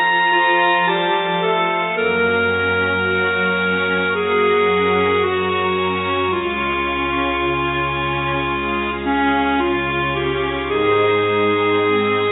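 Nothing here needs fixing; the audio just carries the narrowed sound of a call path, with nothing above about 4 kHz, which fits a 64 kbps G.711 A-law line.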